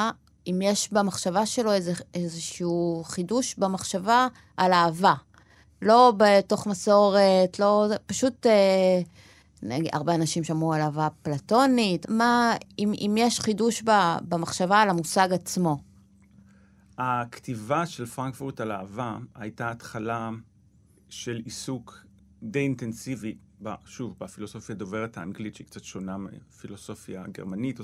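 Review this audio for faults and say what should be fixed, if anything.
Nothing needs fixing; the speech signal is technically sound, with no faults to correct.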